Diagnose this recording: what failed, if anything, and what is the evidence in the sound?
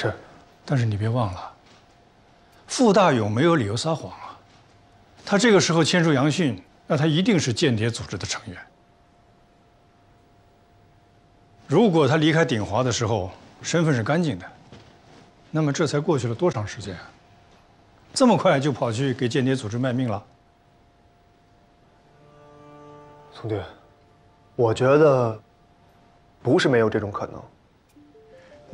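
The failure sits in the codec stage: a corrupt frame concealed by the AAC decoder. From 16.52 to 16.55 s a span roughly 34 ms long is affected, which fits one damaged frame. The decoder detected the bad bits and covered that frame with near-silence or a scrambled copy of the previous spectrum. Unlike an undetected bit error, there is no squeak or burst.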